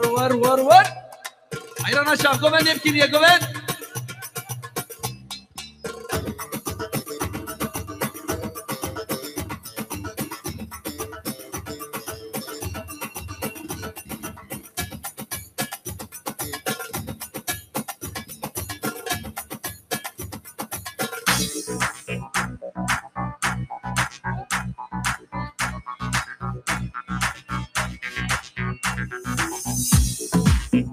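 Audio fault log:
Throughout, noise suppressor applied to music or sounds: the level pumps and thins, with sustained parts and tails sinking while attacks survive. A speech-oriented suppressor is treating steady tones and ambience as noise, swinging gain by roughly 15 dB.
0.99–1.75, 4.27–5.84, 9.63–9.84, 11.29–12.32, 12.89–16.32, 17.14–18.84, 19.38–20.59 and 25.18–25.34 s, sound cut by the noise suppressor: held or decaying sound dips, by about 15 dB at its deepest and only about 7 to 9 dB at 9.63 and 11.29 s. The affected stretches are brief, around two seconds within the 12.89–16.32 s span, because the suppressor misclassified it as noise.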